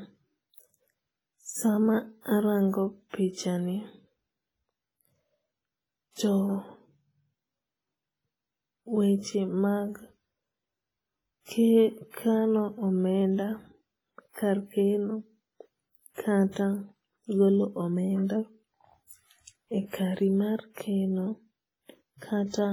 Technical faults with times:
0.00-22.72 WMA compression

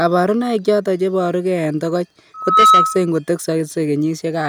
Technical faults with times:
2.34-3.10 loudspeaker feedback squeal

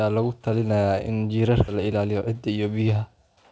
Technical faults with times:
1.68-1.70 skip ahead
1.79-2.73 jitter buffer speed-up

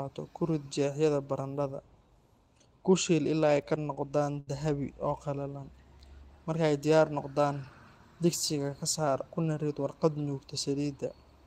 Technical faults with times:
3.61-4.49 repeated stalls (stutter)

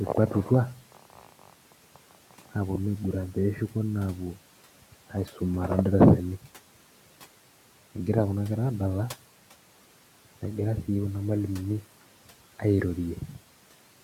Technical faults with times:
0.75-1.54 speech cut by the noise suppressor
1.95-2.55 speech cut by the noise suppressor
5.10-5.41 speech cut by the noise suppressor
5.79-6.13 hard clipping

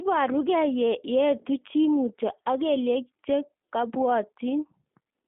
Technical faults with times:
0.00-5.28 G.729 codec

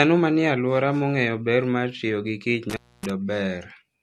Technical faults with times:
0.00-4.02 low-bitrate audio saved at a high bitrate
2.70-3.10 intermittent contact

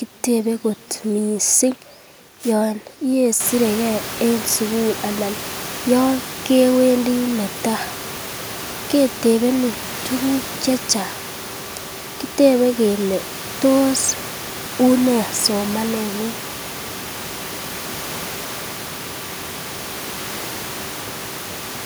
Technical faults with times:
none

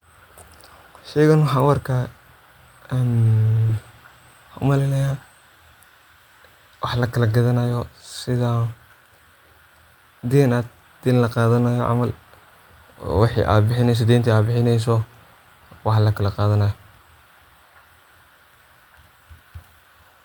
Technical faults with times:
none

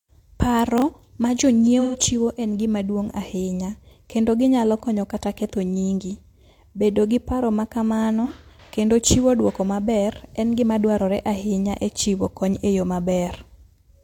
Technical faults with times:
0.78-0.82 chunks out of order
1.80-1.96 AAC frame loss with concealment
8.24-8.31 AAC frame loss with concealment

